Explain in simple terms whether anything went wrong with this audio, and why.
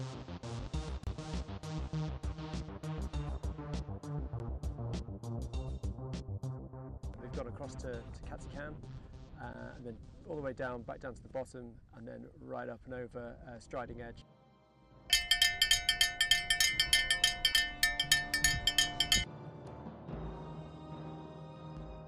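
Three things went wrong. The audio was likely squeezed hard by MP2 compression, which throws away upper frequencies, so the whole clip sounds dull, gurgly and grainy.

A block of digital silence appears, probably where the playback program failed to deliver sound in time. The audio briefly drops to nothing from 1.04 to 1.07 s, and at 4.39 s and 9.53 s.

DAB burbling happens when weak radio reception lets data errors slip through. It causes short blips of noise from 4.86 to 4.95 s and from 7.39 to 7.47 s, and a tiny one at 12.31 s.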